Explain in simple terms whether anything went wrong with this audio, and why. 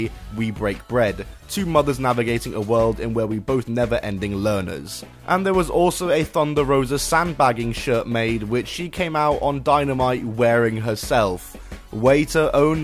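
Nothing went wrong here.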